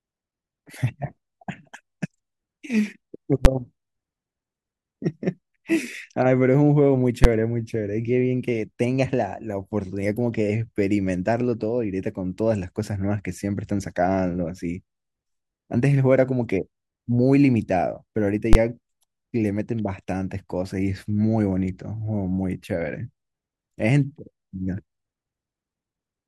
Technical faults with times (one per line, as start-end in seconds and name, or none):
3.45 invalid numbers at full scale
7.24 invalid numbers at full scale
18.53 invalid numbers at full scale